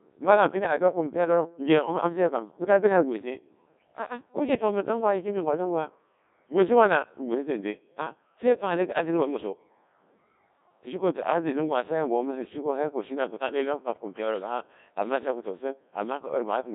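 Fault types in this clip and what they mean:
Codec 2 vocoder: the speech sounds robotic and buzzy throughout, heavily smeared, and held within 200 Hz to 3.7 kHz, with nothing above 3.8 kHz. The decoder rebuilds the voice from sine waves using only pitch, voicing, energy and envelope, which fits a 1.6 kbit/s rate.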